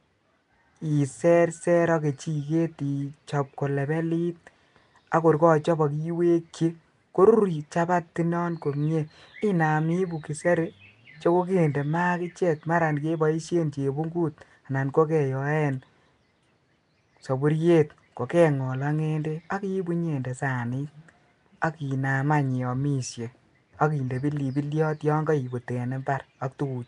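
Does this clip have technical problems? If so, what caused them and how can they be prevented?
Yes. The audio was likely passed through Nellymoser compression, the old Flash microphone codec, which spends a fixed, small number of bits on each short block of samples and fills quieter bands with noise rather than coding them. Throughout the speech this leaves a rough, hissy halo and a smeared, underwater quality, with nothing above 10.7 kHz, consistent with a rate near 44 kbps. Recording or exporting with a modern codec such as Opus or AAC at an adequate bitrate would prevent it.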